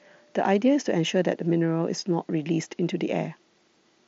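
At 1.61 s, concealed Bluetooth headset packet loss fills a single 7.5 ms gap with repeated recent waveform, nearly inaudible, showing as a tiny copied stretch in the waveform and a faint spectrogram seam, through mSBC wideband audio.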